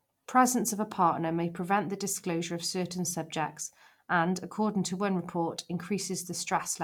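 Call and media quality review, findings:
No call or media quality faults found in this speech recording.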